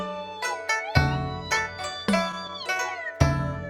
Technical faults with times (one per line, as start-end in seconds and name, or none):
2.00-2.76 scattered short gaps